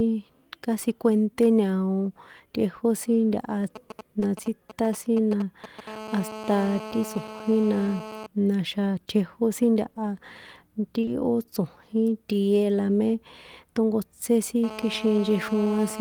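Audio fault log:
3.76–5.89 s, GSM signalling bursts: a nearby 2G phone exchanging control traffic sends short groups of radio pulses, rectified into galloping ticks and brief 217 Hz buzzes, roughly 15 dB below the speech.
4.19–4.23 s, short concealed packet loss: audio missing from the stream was bridged by extending the preceding sound, leaving a brief smear in the speech.
5.89–8.26 s, GSM phone buzz: the phone's transmitter pulses steadily at 216.7 Hz during a call, and rectification turns this into a harsh, harmonic-rich buzz about 14 dB below the speech.
11.01–11.09 s, short concealed packet loss: two consecutive gaps were filled by continuing the last sound before blending back, causing an audible wobble.
14.64–16.00 s, GSM phone buzz: right after "tónkotsé sin" the steady 216.7 Hz call buzz returns, raspy and about 14 dB below the speech, until the clip ends.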